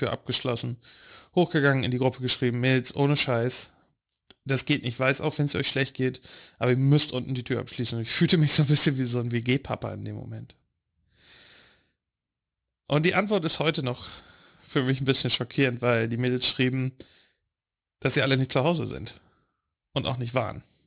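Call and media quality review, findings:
Aliasing, throughout the speech. Sibilants gritty and metallic, energy packed up to a hard 4 kHz band edge, folded components roughly 15 dB under the signal. Resampler with no anti-alias filter, consistent with a 44.1 kHz to 8 kHz conversion.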